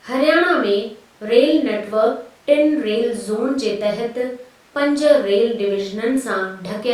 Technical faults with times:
none

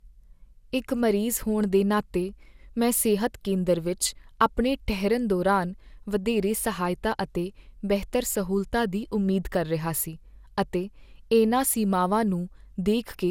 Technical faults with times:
0.00-13.31 generation loss

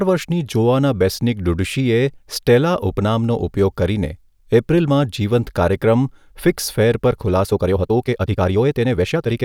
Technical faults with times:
7.45-9.44 time-stretched section

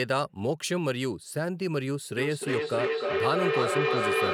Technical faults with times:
2.17-4.33 feedback echo between two devices

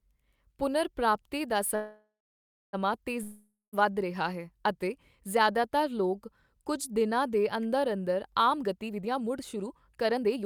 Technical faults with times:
1.75-2.75 call audio freeze
3.23-3.75 long network dropout
8.46-10.46 jitter buffer speed-up

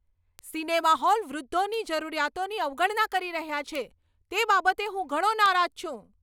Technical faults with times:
0.39 bit error spike
1.74 bit error spike
3.75 bit error spike
5.46 bit error spike

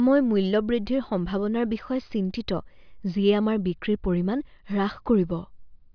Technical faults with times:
none

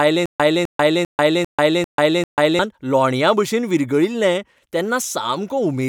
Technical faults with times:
0.00-2.59 stutter with silent gaps

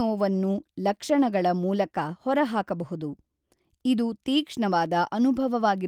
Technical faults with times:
none

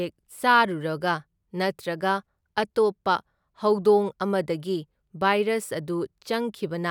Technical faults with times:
none

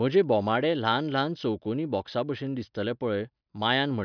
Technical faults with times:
none

